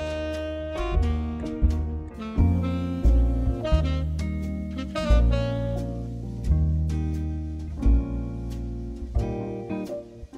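No technical faults can be heard anywhere in this audio.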